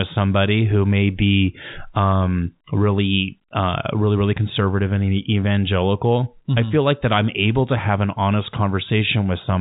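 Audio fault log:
No faults heard in this telephone-coded speech.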